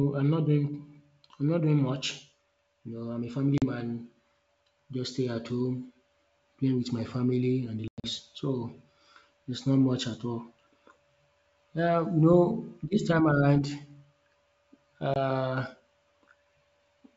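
At 3.58 to 3.64 s, just after "I'm a family", 40 ms of speech drops to hard-edged silence, a couple of packets lost on an ADPCM call. At 7.88 to 8.10 s, after "and the", 140 ms goes missing in scattered gaps, the longest 100 ms. A last 20 ms hole falls at 15.14 to 15.17 s. What separates this from a plain dropout is the recovery. The speech returns briefly and slightly distorted while the decoder's predictor and step size catch up with the sender's. This happens over G.722 wideband speech.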